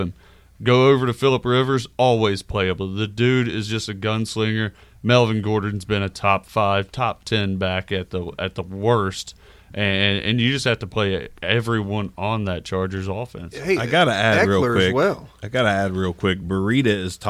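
Nothing goes wrong anywhere in this speech recording; there's simply no technical fault to point to.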